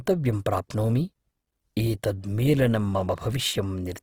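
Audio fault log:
throughout: Opus compression, likely the cause of the plainly audible grainy, rough texture across the speech. The spectrum stays full, reaching up to about 20.4 kHz, but thin bands sound noisy because the encoder refills them with noise or folded copies of lower bands, as a low rate near 16 kbps would require. Unlike MP3, there are few spectral holes, so there is little swirling or warbling, just a pervasive granular roughness.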